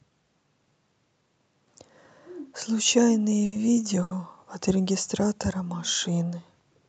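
At 3.45 to 3.54 s and 4.03 to 4.13 s, short stalls from a late packet occur. The jitter buffer ran dry, so the speech is held for 70 and then 80 ms before resuming, with nothing lost. Each stall sounds like a brief hold with a slight buzz or dip.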